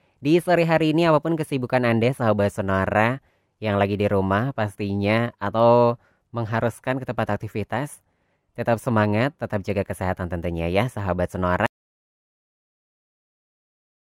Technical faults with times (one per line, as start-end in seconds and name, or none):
11.66-14.03 audio dropout to silence